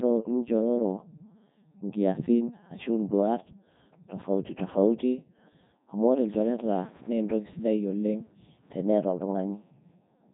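From start to finish the speech has passed through the Codec 2 vocoder at its top 3.2 kbit/s mode, with heavy damage. No waveform survives. Only pitch, voicing, energy and a coarse spectral envelope reach the decoder, which rebuilds the sound from summed sine waves. The result is robotic and buzzy, with nothing above about 3.8 kHz, so the top end sounds dull and boxed in.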